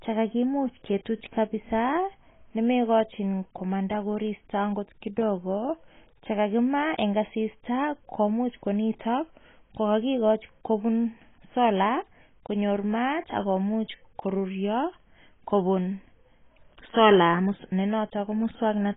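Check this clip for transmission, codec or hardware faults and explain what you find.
One codec fault runs through the whole recording: the speech was likely squeezed through heavy AAC compression at a very low bitrate, around 16 kbps. The encoder cut everything above 3.8 kHz and coarsely quantised the remaining frequency bands, leaving the speech dull and muffled, with a smeared, warbling, fizzy texture on sibilants and held sounds.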